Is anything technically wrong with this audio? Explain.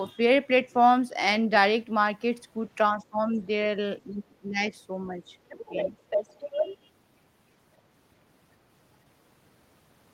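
Yes. This speech has two kinds of echo-canceller trouble.

From 2.94 to 3.29 s and again from 4.04 to 4.72 s, the talker's speech is suppressed in double talk. The level falls by roughly 15 dB in the first dip and roughly 25 dB in the second. The likely cause is the canceller mistaking overlapping speech for echo and attenuating everything. On a waveform the envelope pinches inward, and a spectrogram shows weakened, thinned energy there.

The other side's voice leaks through at 3.35 to 3.39 s, very faint at around 40 dB below the speech. It returns from 5.49 to 5.91 s at about 10 dB down and from 6.1 to 6.76 s at about 5 dB down, close to the talker's level. This is likely residual loudspeaker echo the canceller failed to remove. It appears as a second harmonic pattern layered under the main speech on a spectrogram.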